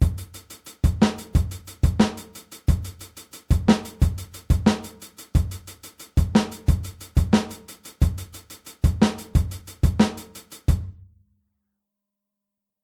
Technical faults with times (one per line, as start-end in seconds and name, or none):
none